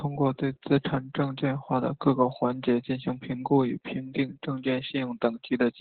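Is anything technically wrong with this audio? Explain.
Yes. Opus voice compression runs throughout this speech. The SILK linear-prediction coder has narrowed the band, with nothing above 4.5 kHz, and coded the excitation coarsely, as at a very low bitrate near 8 kbps. The heavy damage leaves the speech muffled, hoarse and slightly robotic.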